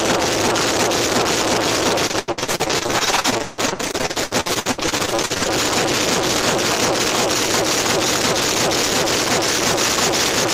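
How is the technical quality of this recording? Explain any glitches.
Technical quality breaks down once, for about three and a half seconds. From 2.07 to 5.50 s the audio turns choppy and robotic, with dozens of short holes. This is repeated packet loss: lost or late packets are patched by extending the preceding sound, covering nearly half that stretch, with the longest gap about 160 ms.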